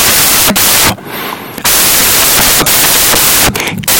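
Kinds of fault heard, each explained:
samples built from the wrong bytes: loud white noise covers the whole speech clip, because each sample's bytes were combined wrongly, so noisy low bits dominate.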